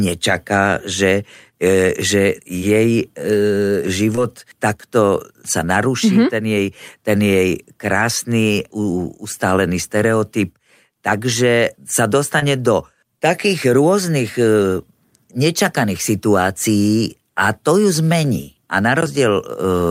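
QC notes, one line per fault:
4.16–4.19 s, short concealed packet loss: about 20 ms of the call arrived too late for the decoder. The receiver filled the gap by extending the preceding sound, leaving a brief smear just before "takto sa naruší".
12.39–12.43 s, short concealed packet loss: another 20 ms gap was filled the same way, with a short wobble right before "do takých".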